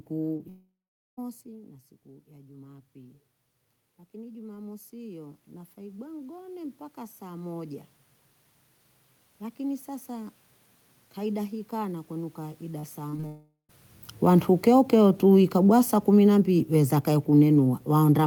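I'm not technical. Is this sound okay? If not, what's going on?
No, there are a few connection problems in this speech recording, mostly near the start and again around the 13-second mark.

At 0.37 to 0.41 s there's a short concealed packet loss. A tiny piece of audio, about 20 ms, didn't arrive in time, so the receiving end quietly patched the gap by stretching out the sound just before it. You'd hear it as a quick smear or wobble rather than a clean gap.

Right after that, from 0.49 to 1.19 s, there's what is likely a long network dropout. Nearly 0.7 s of audio went missing. The system tried to cover it by carrying on the last sound, but that fades out, and for the last 0.44 s or so there's basically just silence. When the sound comes back, that chunk is simply gone. The talker also seems to shift position around the 1-second mark, which is ordinary and not part of the problem.

Then there's automatic gain rising, twice: from 1.46 to 3.24 s, and more noticeably from 4.11 to 7.88 s. 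The incoming sound had dropped quite a bit, so the automatic volume control slowly turned things up to compensate. That's why the sound and the room noise behind it gradually swell together over a few seconds instead of staying steady.

From 12.79 to 13.24 s, just after "kaida hii kana kwenu", there's repeated packet loss, which is what gives it that robotic sound. Four small gaps landed in quick succession, the longest about 40 ms, and roughly a quarter of that half-second had to be filled in. Each patch is brief, but with so many close together the sound turns choppy.

That flows straight into another likely long network dropout from 13.26 to 13.71 s. About 0.4 s never arrived. The patched-in sound trails off, leaving a short silent stretch of around 0.13 s before the real audio returns, minus what was lost. There's also a change in the talker's distance from the microphone around 13.5 s, which again is normal.

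Finally, from 14.10 s to the end there's automatic gain falling. This time the volume control decided things were too loud or too noisy and eased the level down gradually, so the sound and background sink together over the last few seconds.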